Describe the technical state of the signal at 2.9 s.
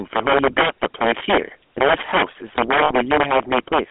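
At 2.9 s the sound sits inside a stretch of lost GSM frames running from 2.84 to 2.92 s. The decoder replaced the missing data by repeating the settings of the last good frame, which fits about three frames going missing. The result is a brief rough, metallic ringing hold. A spectrogram shows a smeared, static band pattern across the gap.

The speech passes through the GSM full-rate codec, and the damage is plainly audible. Its coarse pulse-driven excitation, consistent with a 13 kbps coder, gives a buzzy, gravelly roughness. The line band limits the sound to roughly 250 Hz to 3.4 kHz, so a spectrogram shows nothing above 3.4 kHz and harmonics with a grainy texture.

Integer overflow affects the loud peaks. The level is overdriven by about 10 dB, and a small share of samples exceeds the integer limit and wraps to the opposite sign instead of being held. These are heard as violent, sharp cracks. 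On the waveform, the peaks jump abruptly from one extreme to the other rather than flattening.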